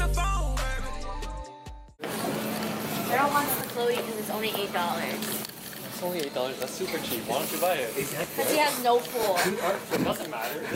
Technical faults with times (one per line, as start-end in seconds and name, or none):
8.24-10.22 periodic USB or driver dropouts